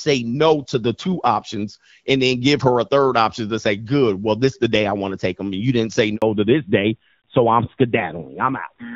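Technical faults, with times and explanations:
6.16 to 6.22 s, handover gap: The call switched networks, and no speech frames arrived during the change. The sound drops out for 60 ms, then resumes on the new link. Anything said in that gap is lost.
6.22 s to the end, fallback to narrowband: After the switch, the call falls from HD Voice to an older narrowband codec. Before it, clear wideband AMR speech fits a 12.65 kbit/s mode. Afterwards nothing above 4 kHz passes, so the sound turns duller and rougher, which fits a narrowband mode near 7.4 kbit/s.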